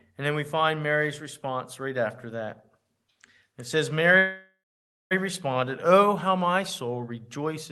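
At 4.17 s the speech stops in a call audio freeze until 5.13 s. The last sound trails off as a fading buzz, then 0.56 s of silence. Packets were likely held up, emptying the jitter buffer. Speech resumes where it stopped, nothing lost, 0.93 s late.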